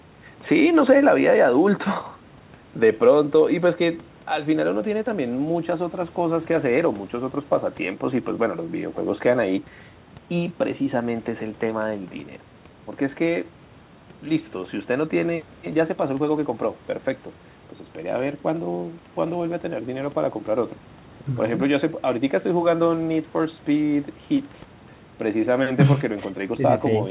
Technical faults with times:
none

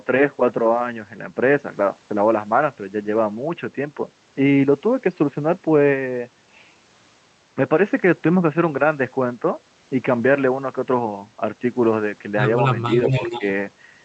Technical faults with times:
12.88-13.44 echo leak
13.39-13.44 speech suppressed in double talk

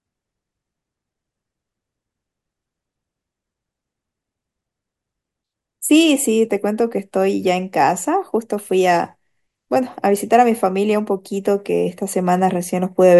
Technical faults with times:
none

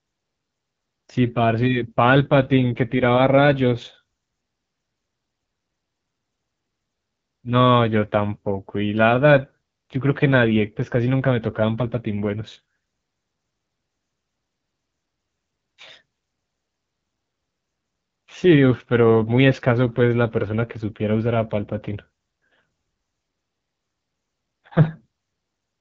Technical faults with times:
0.00-25.80 AMR wideband (HD Voice) codec

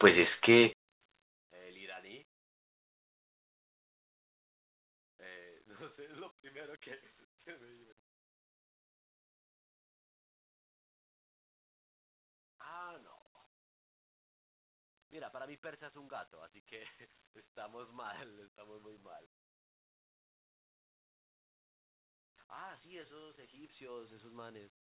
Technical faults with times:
0.73-24.86 one channel inverted

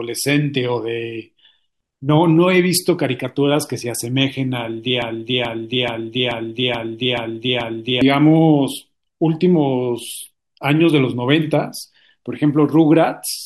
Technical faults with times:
5.02-8.01 broken-record loop

